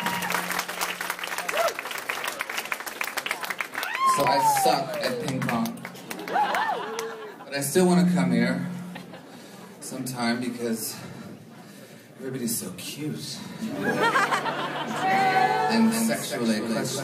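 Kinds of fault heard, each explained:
Doubled audio track: from about 14.94 s to the end, a second full-band copy of the same audio runs along behind the original, roughly a fifth of a second late and a few dB quieter. It snaps in abruptly rather than fading up, and it has no decay or room colour, so it sounds like a clean duplicate rather than an echo. The likely cause is a slower second capture path or an edit leaving two copies out of step.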